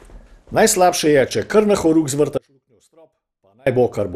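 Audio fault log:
Throughout: generation loss. The speech has a swirly, smeared, hollow quality and blurred consonant attacks, beyond what a single pass at 96 kbit/s would give. This is likely from repeated MP2 encoding, about four passes, each re-quantising on a shifted frame grid so noise and spectral gaps pile up. On a spectrogram the content stops dead near 15.3 kHz, with patchy holes and smeared transients below; the waveform looks softened at onsets.
2.38 to 3.66 s: audio dropout to a faint residue. Right after "če kar na horuk" the speech cuts off abruptly for about 1.29 s, leaving only a faint leak of sound about 35 dB below its normal level, then returns mid-flow. The signal was likely lost while the path after the break stayed live, so the drop is sudden rather than a pause or fade. The waveform collapses to a thin near-flat band with sharp edges; the spectrogram shows a dim, almost empty block.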